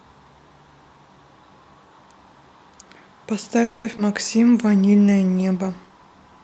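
At 3.63 s the speech stalls for about 0.23 s. The last sound is stretched into a fading buzz or hiss, with no true silence. This is a call audio freeze. Packets were likely held up and the jitter buffer ran dry. The speech then resumes where it stopped, about 210 ms later than before.

Two short concealed packet losses follow, at 3.92 to 3.95 s and 3.97 to 4.00 s. Each is a 30 ms blip. Part of the audio never reached the decoder. The receiver patched the hole by extending the previous sound, so each one comes across as a quick smear or wobble.

From 4.59 s to the end there is a call bitrate drop. The Opus encoder falls from 40 to 17 kbps. With far fewer bits, the coding gets coarser. The speech, already limited to about 8 kHz by the call path, turns rough and watery and stays that way.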